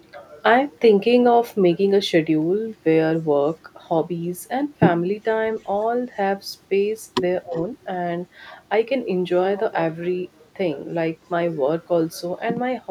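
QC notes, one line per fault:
5.6–5.78 s and 7.51–7.61 s, echo leak: a faint copy of the speech returns 346 ms late, about 35 dB and then 30 dB down, likely from an echo canceller missing loudspeaker pickup.
7.43–7.56 s, speech suppressed in double talk: the speech dips by up to about 20 dB for roughly 150 ms. Both sides overlap here, so an echo canceller likely ducked the talker with the echo.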